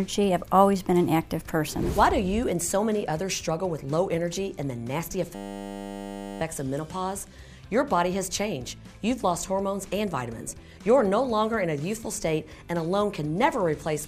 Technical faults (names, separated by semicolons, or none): system hang loop